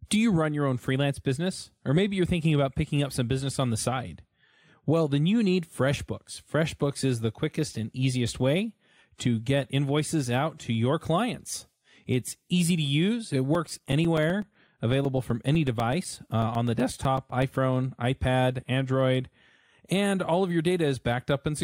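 Periodic USB or driver dropouts run from 13.55 to 17.43 s in this speech recording, ticking every 0.125 s. Each time, something stalls the USB link or audio driver and a few milliseconds of signal drop to silence, giving roughly thirty evenly spaced clicks.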